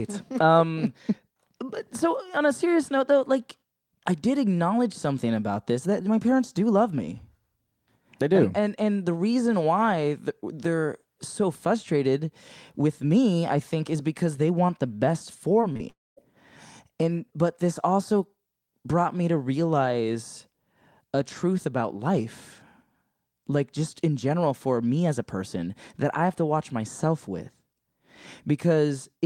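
It's a speech recording, and everything goes wrong in one cluster just after "they want the best." First there's short concealed packet loss: three brief gaps at about 15.61 to 15.65 s, 15.73 to 15.77 s and 15.77 to 15.81 s, each losing around 20 ms. The receiver papered over each hole by stretching the preceding sound for roughly 13, 21 and 26 ms before blending back in, so you get quick little smears and wobbles rather than clean cuts. Right after that comes a long network dropout from about 15.89 to 16.19 s. Roughly 280 ms of audio is simply gone. The concealment carries the last sound forward as a fading buzz or hiss for a moment before things go quiet for a good couple of tenths of a second, and then the speech picks up again further along with that chunk missing. The likely cause is a burst of network trouble on the call path, with the first few lost packets hinting at the bigger outage that followed.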